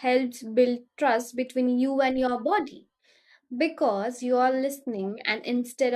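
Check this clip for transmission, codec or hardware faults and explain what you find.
No fault can be heard anywhere in this speech recording, and the signal stays intact and continuous throughout.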